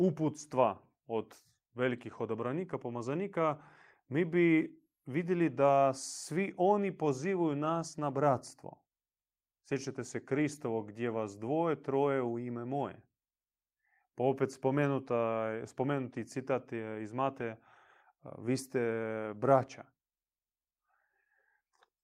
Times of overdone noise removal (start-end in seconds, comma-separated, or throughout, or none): none